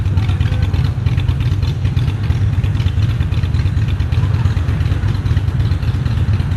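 No faults are audible in these sounds, which carry only the usual coding noise of the call path and a top end that stops near 12 kHz, which fits a standard Opus call setting.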